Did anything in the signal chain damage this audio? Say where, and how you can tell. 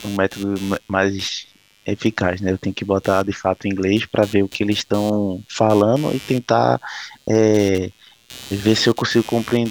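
Yes. Computer activity noise sits in the analogue wiring for the whole speech clip: a buzz pulsing around 100 Hz, roughly 25 dB below the signal. The machine's load currents are modulating a shared ground. Unlike steady mains hum, it tracks processor activity rather than holding constant.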